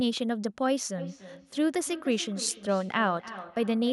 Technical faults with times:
0.98-3.92 feedback echo between two devices

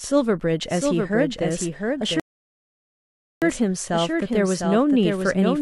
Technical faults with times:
0.00-5.62 doubled audio track
2.20-3.42 rebuffering stall

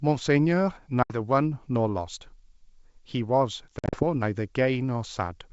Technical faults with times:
1.03-1.17 packet loss on an ADPCM call
3.79-4.04 packet loss on an ADPCM call

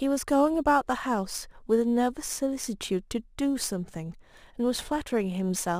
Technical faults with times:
0.00-5.79 crude rate conversion

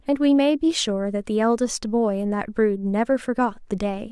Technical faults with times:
none

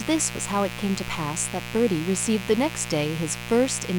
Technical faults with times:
0.00-3.99 mains buzz

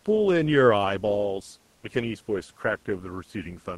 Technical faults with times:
1.75-1.83 comfort noise in place of the background
1.80-1.83 onset clipped by the voice detector

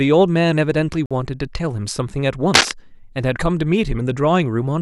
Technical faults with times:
1.06-1.11 digital broadcast dropout
2.54-2.71 cable scratch noise

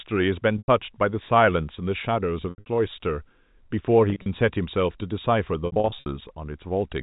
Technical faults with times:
0.58-0.68 packet loss with pitch repetition
2.50-2.66 packet loss with pitch repetition
4.10-4.26 packet loss with pitch repetition
5.66-6.06 packet loss with pitch repetition

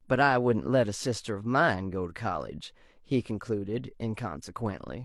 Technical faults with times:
none

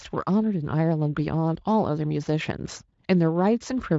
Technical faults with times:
none

